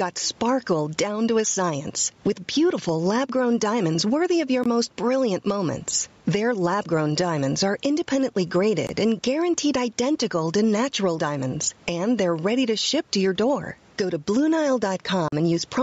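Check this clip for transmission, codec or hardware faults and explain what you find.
Two faults are audible in this speech clip: gain pumping throughout, and three short Bluetooth dropouts.

Gain pumping runs through the whole clip. The level swings by around 10 dB as each loud syllable pulls it down. The likely cause is input gain set far too high with a fast limiter or compressor clamping every peak. That shrinks the gap between loud and soft passages and gives the speech a squashed, breathing quality.

The Bluetooth dropouts are brief holes of silence. The first runs from 4.64 to 4.66 s, between "diamonds worthy of your" and "most brilliant moments". The second runs from 8.87 to 8.89 s, between "grown diamonds are independently" and "and guaranteed identical to". Each lasts about 20 ms. The third, at 15.28 to 15.32 s, is about 40 ms, roughly twice as long, which fits two consecutive lost packets. 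Audio packets likely missed their delivery deadline and were discarded. Playback resumes afterwards as though it had continued, so the speech skips forward rather than pausing.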